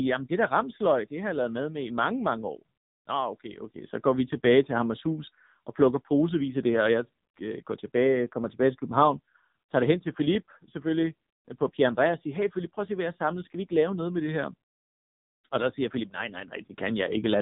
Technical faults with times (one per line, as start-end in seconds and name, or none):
0.00-17.41 AMR narrowband mobile codec